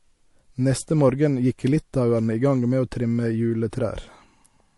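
From start to finish the speech has a watery, swirly quality with smeared edges, likely MP3 compression at a low bitrate, somewhere around 48 kbps. The encoder is short of bits, so it lets weak frequency detail flicker in and out between frames.

Then at 3.70 to 3.73 s there's a pre-echo: a short hiss, roughly 10 dB up, creeps in about 24 ms ahead of a sharp onset. The encoder kept its long 48 ms blocks instead of switching to short ones, so noise meant for the attack leaked backwards.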